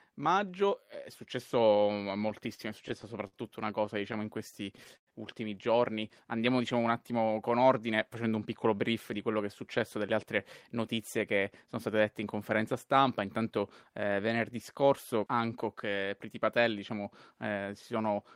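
From 2.29 to 3.35 s and again from 3.86 to 5.10 s, just before "ultimi giorni", the speech catches and drags in short hitches. These are repeated stalls (stutter): packets arrived late, the jitter buffer kept running dry, and the receiver stretched the last sound to cover six and then ten gaps, the longest 52 ms and 98 ms, with nothing actually lost.

Between 6.25 and 6.57 s the speech briefly slows to about 89% of its pace while the pitch stays put. This is a jitter buffer slow-down: with its reserve running low, the receiver repeated pitch periods, adding 41 ms of audio.

Speech sounds slightly hurried from 8.45 to 9.97 s, after "con ordine facendo un", and from 10.78 to 11.89 s, before "dette in conferenza stampa", running at 105% and 107% with unchanged pitch. These are jitter buffer speed-ups: the buffer held excess audio, so the receiver trimmed pitch periods, roughly 70 ms and 100 ms in total.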